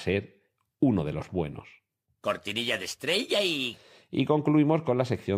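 Speech, with no technical faults to report anywhere in the recording.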